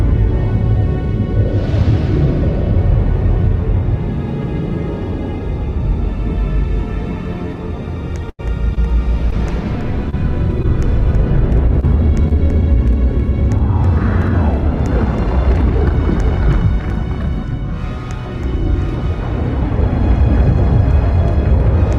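At 8.29 s a burst of packet loss removes about 100 ms of audio, running to 8.41 s. The receiver covers roughly 90 ms of that hole by extending the last received sound and fading it, so it turns into a held buzz or a dying hiss before playback jumps forward with a stretch missing. The length of that sustained, decaying stand-in and the audible skip afterwards separate it from the briefer dropouts that follow.

Six short concealed packet losses come next, at 8.75, 9.30, 10.10, 10.62, 11.80 and 12.28 s. Each one loses about 20 ms, and the decoder fills between 13 and 27 ms by continuing the preceding sound and blending back into the real signal. Every instance is heard as a quick smear or wobble rather than a held tone.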